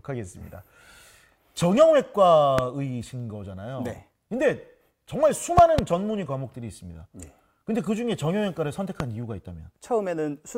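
You'll hear three loud pops cutting through the audio: a single sharp one at 2.59 to 2.61 s, a pair landing between 5.58 and 5.81 s, and another single at 9.00 to 9.03 s. Each is a sudden voltage spike riding on top of the signal, most likely from a plug, switch, static discharge or driver glitch, jumping roughly 20 dB above the surrounding sound (the last one a bit less), while the audio carries on underneath.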